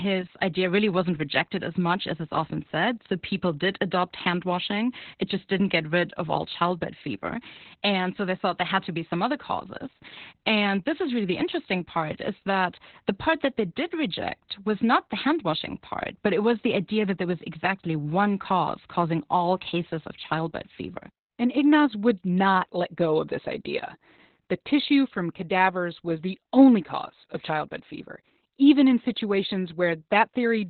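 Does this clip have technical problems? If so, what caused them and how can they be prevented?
Yes. Opus voice compression runs through the whole clip, with heavy damage. Nothing comes through above about 4.3 kHz, so the speech is muffled and boxed into a narrow band. It is also hoarse and slightly robotic, because the linear-prediction coder has too few bits to describe the excitation and codes it coarsely. The sound fits SILK-only Opus at about 8 kbps in narrowband mode. A plain low-pass filter would dull the top end in the same way but leave the remaining band clean. The grainy, buzzy texture inside the band is what marks this as low-bitrate codec damage. To prevent it, encode at a higher bitrate, around 24 kbps or more, so the encoder keeps wideband or fullband audio and codes the excitation finely.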